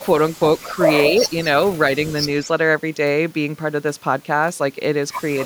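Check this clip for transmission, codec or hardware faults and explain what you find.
One kind of fault is present, an echo leak, at 0.33–0.39, 0.58–0.75, 1.07–1.45 and 2.44–2.48 s. The speech returns about 216 ms late, likely because a loudspeaker-side echo canceller passed residual microphone pickup. The echo sits roughly 35 dB down at first and nears the speech level, about 5 dB below, at 1.07–1.45 s. Spectrograms show harmonic patterns repeated about 0.22 s later.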